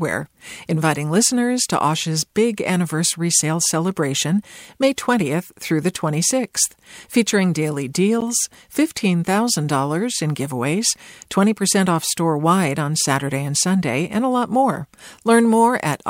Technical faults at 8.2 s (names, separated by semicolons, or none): corrupt frame decoded